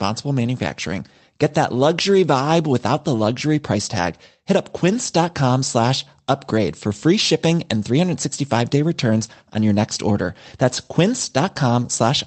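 Nothing's wrong with this speech recording; it came over an ordinary call path through the Opus codec at 32 kbps, and the top end rolling off around 8 kHz along with the usual coding texture is simply what that route normally leaves behind.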